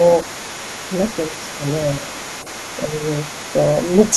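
From 0 to 4.14 s, an echo canceller likely failed to fully remove loudspeaker playback from the microphone, so the other side's voice leaks through underneath the speech for the whole clip, sitting roughly 20 dB below it as a faint second voice.

Between 2.0 and 2.21 s, the echo canceller likely mistook simultaneous talk for echo and turned everything down, producing speech suppressed in double talk: the talker's level dips by a few decibels for about 200 ms.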